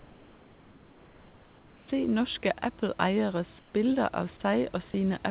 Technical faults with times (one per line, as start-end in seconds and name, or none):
0.00-1.88 comfort noise in place of the background
3.59-3.74 comfort noise in place of the background